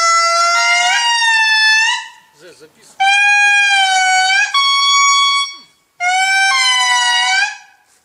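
No technical faults are audible anywhere in the recording.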